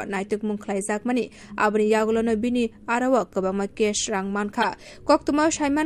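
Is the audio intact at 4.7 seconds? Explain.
No, not quite. Right around that point there's a corrupt frame decoded, running from about 4.62 to 4.68 s, so it ends just short of 4.7. A few compressed frames came through with flipped bits, and the decoder played them anyway. The misread gains and codes throw energy into the wrong frequencies for the length of those frames, so you hear a short, fairly loud chirpy burst of noise sitting on top of the sound.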